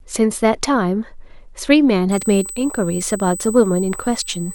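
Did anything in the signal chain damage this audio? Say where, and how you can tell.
Yes. From 2.12 s to the end of the clip a steady, fixed-pitch whine at 8 kHz sits under the speech, roughly 15 dB below it. This is USB whine entering at the analogue wiring stage: the bus's 125-microsecond microframe cycle pulls current in 8 kHz pulses that leak through shared power or ground into the audio path. Unlike mains hum, it sits at 8 kHz instead of 50 or 60 Hz, and its pitch stays constant.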